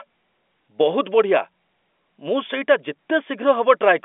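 No technical faults can be heard in the speech, which carries the narrow band of a telephone line running from about 250 Hz to 3.5 kHz, consistent with a 64 kbps G.711 A-law path behaving as intended.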